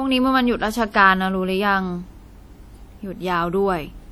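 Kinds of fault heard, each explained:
WMA compression: The speech has a ringing, washy quality throughout, with a hiss that swells and fades along with the voice, and this damage is plainly audible from start to finish. The likely cause is a Windows Media Audio transform codec at a low bitrate, one that sounds consistent with about 48 kbps. Its long blocks smear quantisation noise over tens of milliseconds around each sound, and weaker spectral detail is discarded, although content still extends up to about 20.1 kHz.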